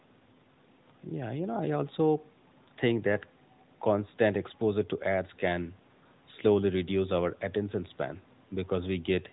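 No technical faults are audible.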